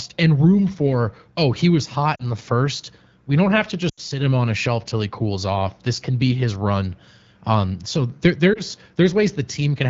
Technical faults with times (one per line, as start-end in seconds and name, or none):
2.15-2.25 lost AMR speech frames
3.89-4.00 lost AMR speech frames
8.53-8.60 lost AMR speech frames